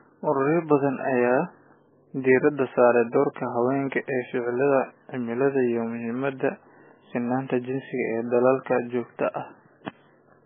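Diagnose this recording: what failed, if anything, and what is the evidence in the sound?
The codec stage failed, likely from MP3 compression. Across the whole speech clip nothing sounds above 3.5 kHz, and the damage is heavy and watery. That points to a very low bitrate, near 9 kbps. Starved of bits, the encoder cut the treble and dropped weak frequency lines.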